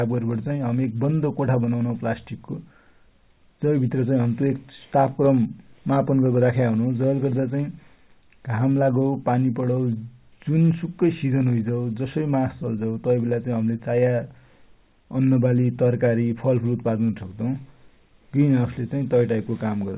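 No technical faults can be heard in the speech, which comes through a narrowband call path with nothing above 4 kHz, consistent with G.711 A-law at 64 kbps.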